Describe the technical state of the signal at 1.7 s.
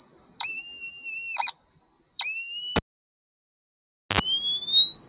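At 1.7 s the signal is intact, carrying only the band-limited sound of the WebRTC call path, with nothing above 4 kHz as fits a G.711 mu-law link at 64 kbps.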